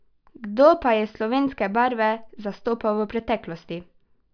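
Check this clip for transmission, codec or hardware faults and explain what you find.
No transmission, codec or hardware faults can be heard anywhere in this speech recording, and the signal stays technically intact throughout.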